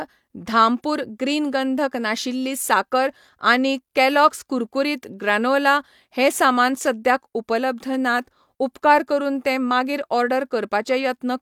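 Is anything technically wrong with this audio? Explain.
No, nothing technically wrong turns up anywhere in this speech recording.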